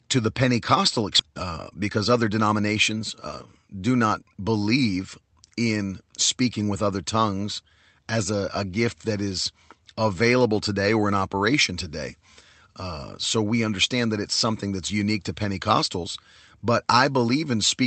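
Speech heard through a call path, with coding noise and a top end that stops near 8 kHz, consistent with an Opus call codec. At 1.2 s there is a skip ahead: roughly 0.7 s of speech is gone and the two sides are butted together with no silence or fill. That distinguishes it from a dropout or concealed packet loss, which would leave a gap, a fade or a smeared, buzzy patch. Here the sound simply lurches forward, the likely result of a jitter buffer that overflowed and discarded queued audio so that playback caught up. Straight after, from 1.29 s to 3.49 s, a jitter buffer speed-up runs the speech at about 112 % of normal rate, trimming a few hundred milliseconds in total by cutting out short pitch-period slices over and over. The voice sounds hurried but keeps its pitch, which rules out resampling or a tape-style speed change, where faster playback would also raise the pitch.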